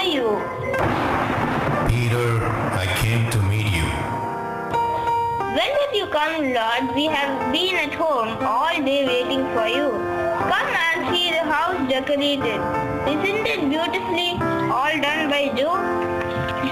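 A gritty, inharmonic fizz runs through the whole clip, riding on the louder and brighter moments, which marks crude rate conversion. The rate was apparently changed by simply dropping samples, which fits a 48 kHz to 44.1 kHz conversion with no filtering, and the resulting error sits roughly 25 dB below the sound. On a spectrogram this appears as faint spurious lines unrelated to the true harmonics; a zoomed waveform shows small irregular steps.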